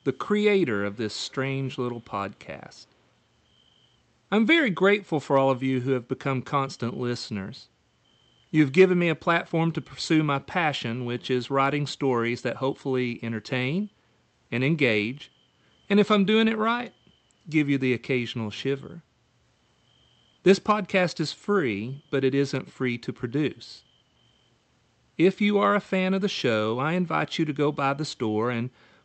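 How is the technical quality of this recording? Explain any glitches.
The speech has a brief echo leak near the start. There are two faint repeats, from 0.93 to 1.11 s and from 1.28 to 1.34 s. Each trails the original voice by 0.36 s. The copy sits roughly 35 dB below the speech, so it is a soft ghost rather than a clear double. The likely cause is a far end on a loudspeaker. Its echo canceller let some of what its microphone caught pass back into the call. The call path's band limit of 8 kHz is heard as a top-end cut-off.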